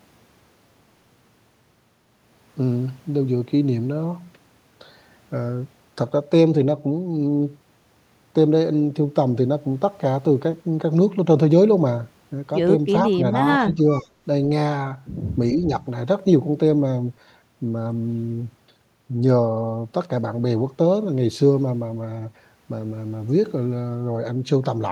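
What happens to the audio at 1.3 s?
Nothing goes wrong at 1.3 s; the speech plays through that moment intact, with no dropout, glitch or other fault.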